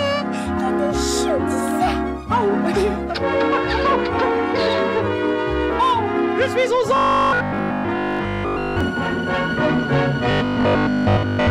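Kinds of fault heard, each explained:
Robotic sound from repeated short buffers: The sound turns into a rigid, metallic 50 Hz buzz. It likely comes from 20 ms chunks repeating.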